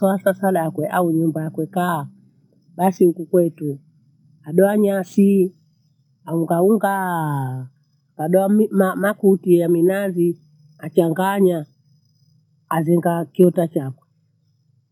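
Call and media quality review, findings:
Imaging from sample-and-hold upsampling, entire clip. Bright metallic fizz riding on the speech, tracking its level. Probable component: sample-rate converter, 22 kHz to 44.1 kHz, repeating each sample with no interpolation filter. Mirrored speech spectrum in the 11.03 to 22.05 kHz band, about 32 dB below the signal. The lowest image moves against the voice pitch.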